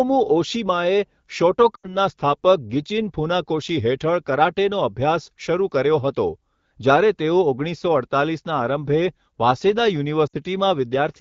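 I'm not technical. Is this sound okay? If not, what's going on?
No. There are two short glitches caused by lost AMR speech frames. This is a phone-call problem: radio errors spoiled small chunks of the speech data. The decoder then guessed, repeating the last good sound and letting it fade. You hear this at about 1.76 to 1.96 seconds and again at about 10.27 to 10.36 seconds. Each one sounds like a brief warble or smear that dips quiet. The speech comes back a little rough for a moment. The call uses the HD Voice codec, which carries the speech clearly.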